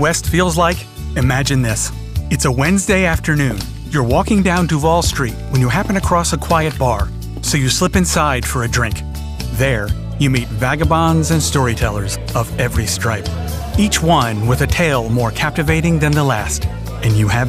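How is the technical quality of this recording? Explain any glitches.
No glitches or technical faults can be heard anywhere.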